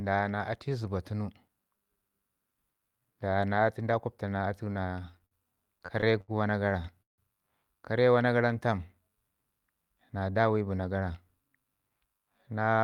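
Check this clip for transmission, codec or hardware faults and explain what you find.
Two transmission faults are audible in this speech clip: a stretch of stuttering playback and, later, a brief hurried passage.

Repeated stalls (stutter), 5.11 to 7.21 s: The speech catches and drags about ten times, each hitch briefly holding the last sound before the flow resumes. The longest hold lasts 156 ms. In total about 384 ms is filled this way, roughly 18% of the span, yet nothing is lost. Packets were reaching the receiver late, so its jitter buffer kept running dry, and each time it extended the last sound until fresh audio arrived.

Jitter buffer speed-up, 9.76 to 10.67 s: Here the speech sounds rushed, running at about 111% of normal speed while the pitch stays put, so the voice doesn't rise. Roughly a tenth of a second of audio disappears across the passage. The jitter buffer had built up more audio than it wanted to hold, and the receiver trimmed many tiny pitch-period slices in quick succession to shrink that backlog.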